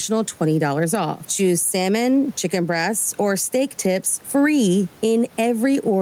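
Gain pumping runs through the whole recording, most likely from input gain set far too high for the microphone, with a fast limiter or compressor clamping down whenever the speech gets loud. The level swings by around 10 dB, and the room noise sits about 34 dB below the speech. Loud and quiet passages end up flattened toward one level, giving a squashed sound.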